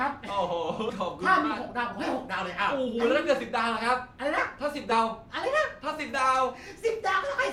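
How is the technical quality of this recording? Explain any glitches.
Two short dropouts stand out. At 0.89–0.92 s and again at 4.91–4.95 s, compressed frames are skipped: the speech jumps ahead by about 100 ms, which fits roughly five 20 ms frames going missing or being rejected by the decoder.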